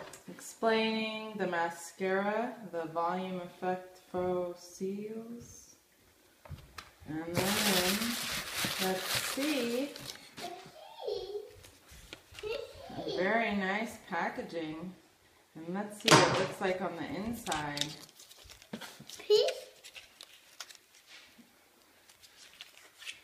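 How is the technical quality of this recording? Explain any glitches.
There's one glitch. From 14.55 to 16.64 s, channel delay causes comb filtering: one channel lags by roughly a single sample before the mono sum, notching the top end near 20 kHz and dulling the air.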